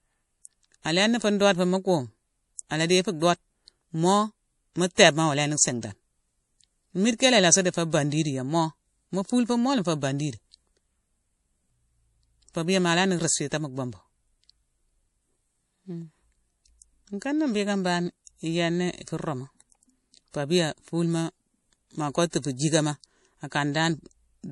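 From start to finish, the speech carries plainly audible MP3 compression damage, likely from a low bitrate around 48 kbps. Nothing sounds above 11.4 kHz. Weak frequency lines drop in and out between frames. S sounds turn watery and chirpy, and consonant attacks smear.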